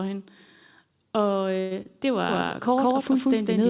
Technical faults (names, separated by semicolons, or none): call audio freeze; short concealed packet loss; doubled audio track